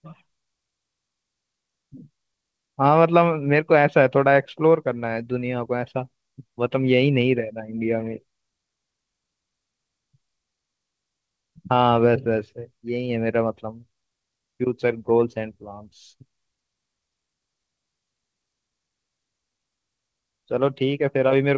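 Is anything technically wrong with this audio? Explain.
No, nothing stood out on listening to this speech, which comes through a call link whose audio stops at about 8 kHz.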